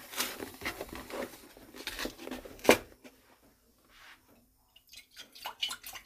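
At 1.45 and 3.70 s, compressed frames are skipped: about two 26.1 ms frames are lost each time, so the sound jumps ahead with a brief, smeared blip rather than a sharp click or silent gap.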